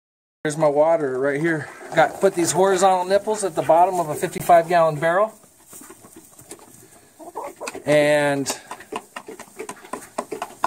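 At 4.38 to 4.40 s the sound drops out for about 19 ms, a short hole that is most likely a Bluetooth dropout. A packet of audio apparently failed to reach the headphones in time and was discarded, which fits a single lost packet. The output went silent until the next good data arrived. Playback then picks up later in the material, as though it had kept running through the gap. On a waveform this appears as a narrow flat stretch, and on a spectrogram as a thin vertical blank band across all frequencies.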